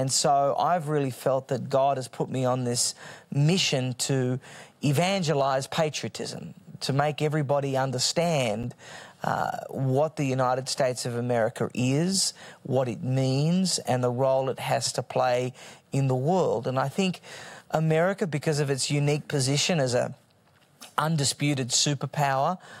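Nothing technically wrong turns up anywhere in this speech recording, so there's no fault to point to and no cause to trace.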